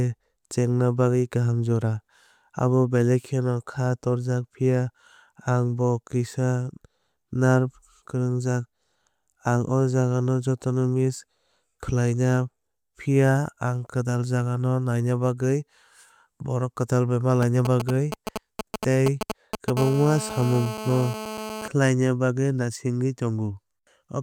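GSM signalling bursts run from 17.43 to 19.70 s, starting just after "borok kwtal bai". A 2G phone close by is sending brief clusters of radio bursts, as it does while signalling, and the audio circuitry rectifies them into sound. The result is a galloping dit-dit-dit of short buzzes at about 217 Hz, almost as loud as the speech itself, cutting in and out.

GSM phone buzz follows from 19.77 to 21.68 s, ending just before "bagwi naisingwi". Here the phone has moved into a call and transmits continuously at 217 bursts per second. Each radio pulse is rectified by the audio path, producing a hard, raspy 217 Hz tone rich in harmonics that has nothing to do with the speech. It sits about 10 dB below the speech and is nearly steady.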